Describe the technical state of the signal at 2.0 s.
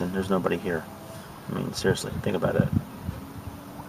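At 2.0 s the signal is intact, with no audible fault.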